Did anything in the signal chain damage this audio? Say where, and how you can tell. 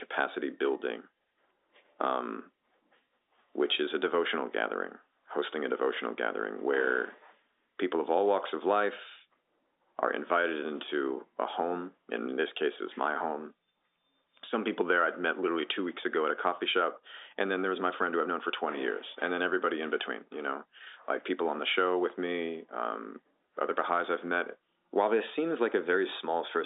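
No, nothing in the chain damaged this speech.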